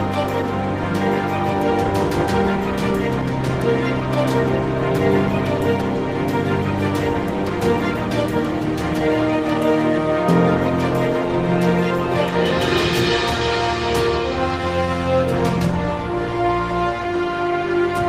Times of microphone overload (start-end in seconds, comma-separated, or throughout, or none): none